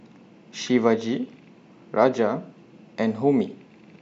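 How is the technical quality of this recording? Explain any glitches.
One glitch stands out in this speech recording. At 0.61 to 0.65 s there is a corrupt frame decoded. Damaged bits in a few compressed frames were still played, so energy lands at wrong frequencies. It sounds like a brief chirp or noise burst, peaking around -25 dBFS.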